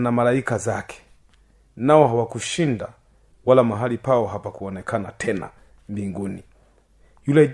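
No technical faults can be heard at any point in the speech.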